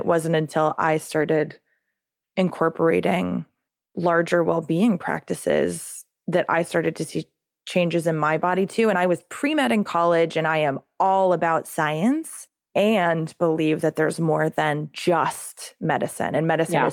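Nothing's wrong here: it's a speech recording with no technical faults to point to anywhere along its length.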